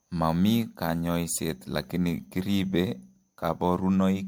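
Across the whole speech clip the sound is swirly and hollow, with a smeared, watery texture and softened attacks that blur the starts of syllables, while the top end stops at about 19.9 kHz. This is generation loss, likely from the audio being encoded and decoded around five times with an MP3 codec near 96 kbit/s. Each pass requantises on a shifted frame grid, so the noise and spectral holes pile up.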